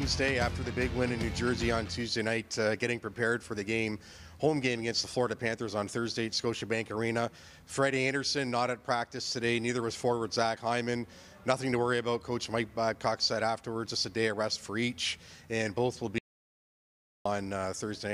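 At 16.18 s the sound stops dead and stays in silence until 17.25 s, roughly 1.07 s with no room tone at all. This is an audio dropout to silence, likely from the input being lost while the recorder kept writing silence, so that stretch is simply gone.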